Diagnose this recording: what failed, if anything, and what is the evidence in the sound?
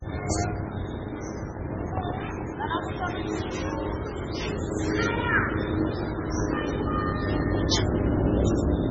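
Overlap-add ripple runs throughout, from a frame-processing stage. The level pulses by about 6 dB roughly 100 times a second, which gives the sound a metallic buzz with extra tones around each note. The audio was split into windowed frames and rebuilt with an overlap whose window gains do not sum flat, so loudness dips once per frame.

MP3 compression damage is also present throughout, at the codec stage. Nothing is left above 8.3 kHz, and a heavy watery swirl with smeared attacks fits a starved encoder at around 16 kbps, likely MP3. It cut the treble and switched weak frequency lines on and off between frames.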